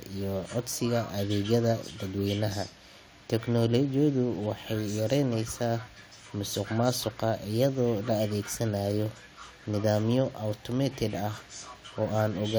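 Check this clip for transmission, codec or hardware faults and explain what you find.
No faults can be heard anywhere in this speech recording. There is nothing in the audio that calls for an explanation.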